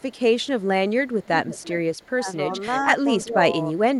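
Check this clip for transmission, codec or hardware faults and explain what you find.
Two faults appear in the speech: an echo leak and speech suppressed in double talk.

Echo leak, 0.0–0.21 s, 0.38–0.67 s, 1.06–1.73 s, 1.93–2.1 s and 2.72–2.79 s: a faint copy of the speech trails it by 338 ms. It is barely audible in most spans but clearly present from 1.06 to 1.73 s, only about 10 dB down. The likely cause is a loudspeaker at the far end whose echo canceller let part of its microphone pickup through.

Speech suppressed in double talk, 2.11–2.27 s, 3.22–3.43 s and 3.72–3.8 s: the talker briefly sinks, by about 20 dB at the first span and less at the others, while the other side speaks. This is likely an echo canceller mistaking overlapping talk for echo and ducking everything.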